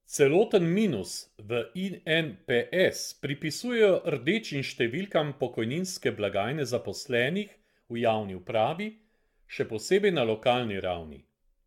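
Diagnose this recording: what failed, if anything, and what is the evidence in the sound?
Codec stage: the speech has generation loss throughout, swirly, hollow and smeared, with attacks blurred and nothing above 17 kHz. Likely repeated AAC-LC re-encoding, roughly seven passes at what sounds like 96 kbit/s, each requantising on a shifted frame grid, so errors pile up.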